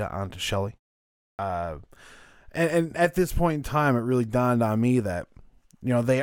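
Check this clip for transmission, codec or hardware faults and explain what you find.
One fault is present: a clipped start after a pause. At 1.32 s, after 0.61 s of silence, about 69 ms is lost. The output device was still waking. The word starts abruptly, missing its first sounds.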